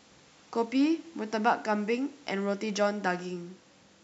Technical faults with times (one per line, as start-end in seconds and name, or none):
none